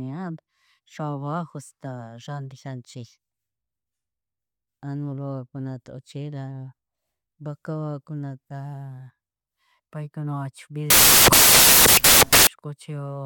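At 10.90 s the speech gives way to loud, harsh broadband noise. It lasts until 12.47 s, about 1.6 seconds. This is a case of samples built from the wrong bytes. The reader combines each sample's bytes incorrectly, either shifted by one byte or in the wrong order. The small, rapidly changing low bits end up as the large part of every value. The result is a harsh hiss.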